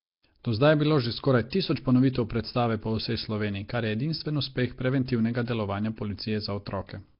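A rough, hissy halo and a smeared, underwater quality run through the whole of this speech recording, with nothing audible above about 5.3 kHz. The heavy damage points to a low-bitrate Flash-era microphone codec, likely Nellymoser compression, which spends a fixed two bits per sample and fills starved bands with noise. Two attacks, at 1.50 to 1.52 s and 2.13 to 2.15 s, are each preceded by a brief hiss about 24 ms and 23 ms long and sound softened. That is pre-echo: quantisation noise sized for the loud onset spreads back across the quiet start of the same transform block.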